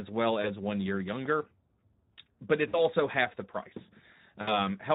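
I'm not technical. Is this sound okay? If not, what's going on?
No. The Speex codec, an older speech compressor from internet calls and game chat, runs through the whole recording. It squeezes the speech into very little data and keeps only a rough copy, so the speech sounds noticeably hoarse and grainy throughout.

VoIP packet loss concealed by the speech codec happens three times: at 0.41 s, just before "one year younger"; at 2.67 s, just before "half the price"; and at 4.41 s, right after "half the price". Small pieces of audio went missing in transit, about 20 ms the first time and about 60 ms the other two. The receiving end filled each gap by stretching the last sound into a buzzy or noisy sound that fades. The speech then stays weak or warped for a moment while it recovers, so each blemish lasts roughly 0.1 to 0.2 s.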